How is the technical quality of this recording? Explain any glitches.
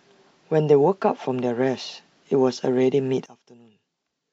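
Quality holds until 3.26 s. From there to the end, the speech collapses by about 22 dB into a faint residue. The likely cause is one channel inverted: opposite polarity cancels the centred voice in mono. Unlike a dropout, a faint ghost remains.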